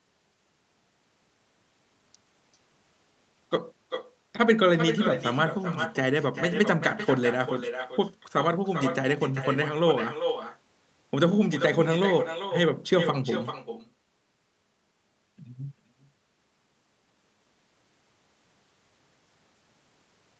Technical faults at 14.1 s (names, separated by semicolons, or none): echo with no canceller